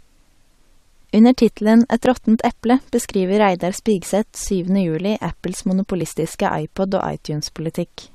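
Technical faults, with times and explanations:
2.06 s, 4.02 s, 6.01 s: overlap between stream segments. Tiny skips in the speech every 2 s, where overlapping segment joins trim 5 to 17 milliseconds and the waveform jumps.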